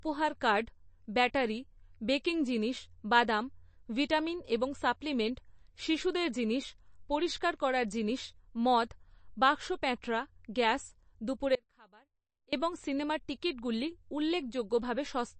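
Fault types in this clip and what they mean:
MP3 compression: Speech coded with too few bits, likely by an MP3 encoder at a low rate, which fits roughly 34 kbps. Here the encoder has discarded everything above 8.3 kHz, so sibilants lose their top and sound dull. Weak frequency components drop in and out between frames, giving the audio a watery, swirling texture with metallic chirps on s sounds and softened consonant attacks. The damage is plainly audible throughout.
Audio dropout to a faint residue: From 11.55 s to 12.53 s, the speech cuts out abruptly for just under one second and returns just as suddenly. The gap is not silent. It holds a faint trace of sound, roughly 30 dB below normal level. That residue points to a likely loss of the main signal with the downstream path still live, so only low-level leakage got through. The hard edges set it apart from a natural pause or fade.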